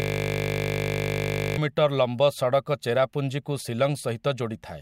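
A speech clip that opens on a steady 50 Hz buzz, already under way when the audio begins and lasting until 1.58 s. This is a system hang loop: the system froze while the sound hardware kept replaying one 20 ms stretch of its ring buffer dozens of times.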